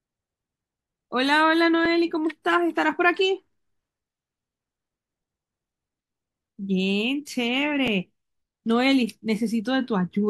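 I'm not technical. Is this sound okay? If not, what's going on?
No. There are overlapping chunks: at 1.86 s and 7.88 s, about 7 ms of sound plays twice where 2-second pieces were joined, giving a click or stutter.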